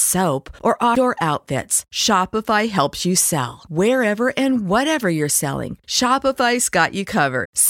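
A brief glitch breaks into the speech at 0.95 s, and a second, longer one sounds from 7.43 to 7.46 s. Both come from damaged data in a compressed stream: a stretch of the encoded bytes was corrupted, so the decoder could not read those frames correctly, lost sync, and hunted for the next valid frame header before clean decoding resumed.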